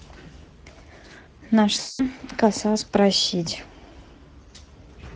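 The whole thing runs through the Speex codec, and it shows. The speech sounds hoarse and grainy, which fits a middling setting around 16.8 kbps. At 1.79 to 2.09 s there's VoIP packet loss concealed by the speech codec: the decoder stretches out the last sound, which fades, and the voice stays weak or distorted afterwards, about 200 ms lost. It happens again, briefly, at 4.65 to 4.72 s.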